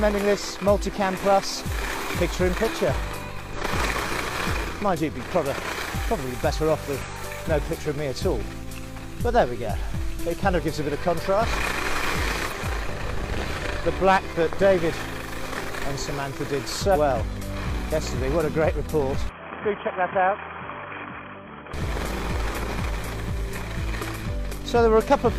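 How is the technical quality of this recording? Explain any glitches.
The recording has two kinds of fault: five short bursts of damaged data in a compressed stream, and a temporary switch of input to a poorer device.

The damaged-data events sit at 3.53–3.59, 7.02–7.07, 12.45–12.51, 16.91–16.97 and 21.41–21.46 s. Each lasts about 50 to 60 ms. Corrupted bytes made the decoder misread frames and hunt for the next header. Each is heard as a chirp, squawk, click or short hole in the sound.

From 19.29 to 21.74 s, the sound loses everything above 3.3 kHz and drops about 5 dB. A new noise floor appears, roughly 50 dB below the signal. There is no gap at either change. The likely cause is an input switch to a poorer device.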